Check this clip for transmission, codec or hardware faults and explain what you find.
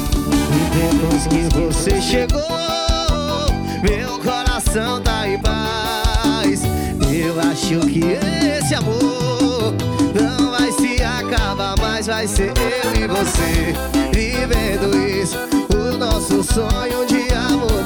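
One fault is present. From the start until 2.22 s there is a doubled audio track: a single full-band copy trails roughly a fifth of a second behind, about 5 dB quieter, and stops abruptly. The likely cause is a second, slower capture path. Unlike room echo, it has no decay and no added room colour.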